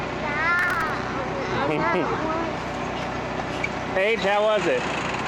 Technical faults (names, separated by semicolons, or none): processor overload crackle